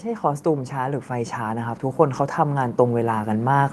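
From 0.05 s to the end at 3.72 s, automatic gain rising: the gain control judged the input too quiet and kept pushing its gain up, so the speech and the background noise swell together steadily, all heard through a call codec band-limited at 12 kHz.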